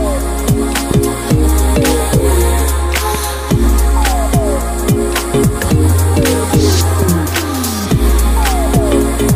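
Loud pops at 0.91–0.93 s, 3.15–3.17 s, 7.02–7.04 s, and a double pop at 8.76–8.94 s, each roughly 10 dB above the sound, likely from voltage spikes. Unlike dropouts, the sound continues underneath.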